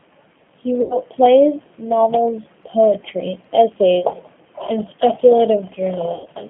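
Throughout, the speech passes through a G.729 codec, which fits an 8 kbit/s coder that rebuilds each short frame from a filter, a pitch guess and a few pulses. The line band runs from about 150 Hz to 3.4 kHz, and the damage is plainly audible as a rough, synthetic edge.

At 0.82 to 0.97 s and again at 6.14 to 6.28 s, VoIP packet loss concealed by the speech codec occurs: packets went missing, and the decoder stretched its last frame into a fading buzzy tone or coloured noise, with distortion lingering after speech returns. The gaps point to roughly 80 ms and 100 ms of missing audio.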